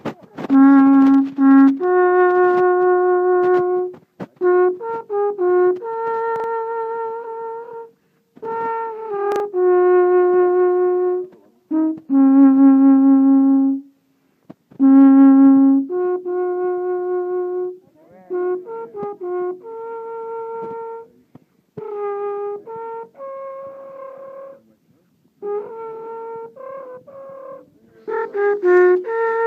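Chunks play out of order at 6.36 to 6.44 s and 9.32 to 9.40 s. Each time, a 40 ms chunk plays one slot late, briefly jumbling the sound.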